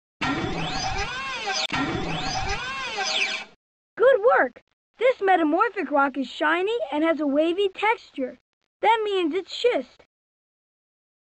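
Nothing stood out as a technical problem on listening to this audio.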